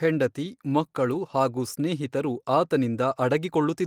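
At 1.13 to 1.15 s, a single lost packet was rebuilt from error correction: the following packet carried a low-bitrate copy, which the decoder played in its place. There is no gap, but those 20 ms of speech sound rougher and noisier.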